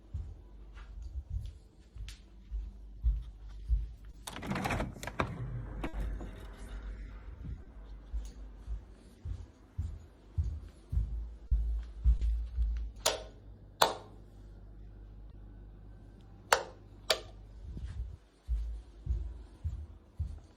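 Short concealed packet loss occurs at 4.11 to 4.15 s, 7.63 to 7.67 s, 11.47 to 11.53 s, 12.17 to 12.21 s and 15.31 to 15.35 s. Each time, 20 ms of audio (40 ms at 11.47 s) arrived too late for the decoder, which extended the preceding sound to cover the hole and then blended back. Each gap is heard as a brief smear or wobble.

A burst of packet loss at 5.87 to 5.95 s drops 60 ms of consecutive audio. The receiver keeps extrapolating the last sound while lowering its level. What plays is a held buzz or fading hiss, after which the audio resumes with that stretch missing.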